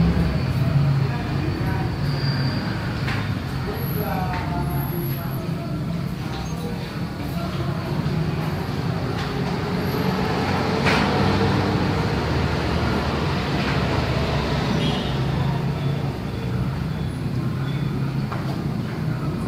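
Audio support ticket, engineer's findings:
Skip ahead at 5.37 to 5.39 s. Playback jumps forward with no fill and no audible gap. Roughly 0.4 s of audio missing. Two sides of the cut are butted together. Probable component: jitter buffer. Mechanism: buffer overflowed with later audio already queued. Oldest stretch discarded to catch up. Delay shortened by about the same 0.4 s. Single event.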